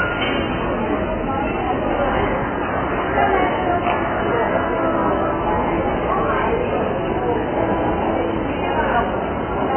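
From start to finish the sound is band-limited, with nothing above about 3.1 kHz, and carries heavy codec damage: a dull, smeared quality with a watery, fizzy texture where the spectrum has been thinned out. The likely cause is AAC compression, here AAC-LC at a very low bitrate, on the order of 8 kbps. At that rate the encoder lowers its cut-off and leaves holes or noise-filled bands across the spectrum.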